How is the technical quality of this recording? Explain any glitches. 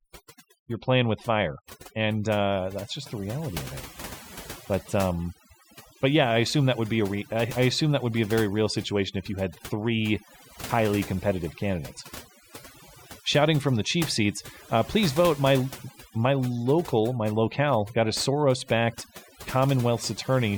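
The recording's technical quality is compromised by one fault that runs the whole way through: overdone noise removal. Across the entire clip, a noise reduction stage set far too aggressively pushes individual frequency bands down or out whenever their level sits near its noise estimate. Quieter components of the speech fall below that threshold and are stripped along with the noise, so the background drops and breaks up into twinkling specks.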